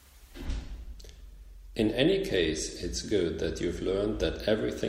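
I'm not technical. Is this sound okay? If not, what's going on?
Yes, this speech recording is fine. Nothing in it needs fixing or explaining.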